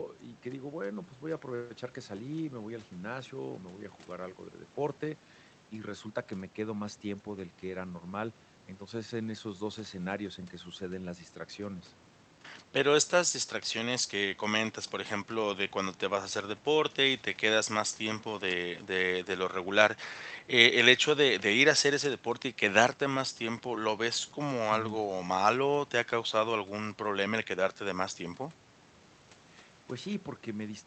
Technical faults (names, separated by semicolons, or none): none